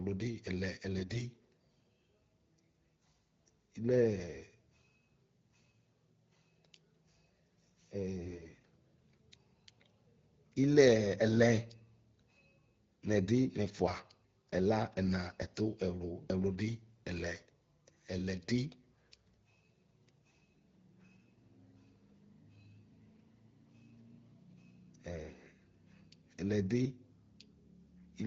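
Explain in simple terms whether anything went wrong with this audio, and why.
Twice the speech turns briefly hoarse and scratchy, almost gargly, from 0.97 to 1.18 s and again, a little longer and rougher, from 8.24 to 8.64 s, while the pitch and loudness stay roughly the same. These are AMR bit errors: over a weak phone link, some of the less protected data describing the voice arrived corrupted, so the phone rebuilt those moments from slightly wrong instructions. The AMR wideband (HD Voice) codec carrying the call adds only light roughness of its own.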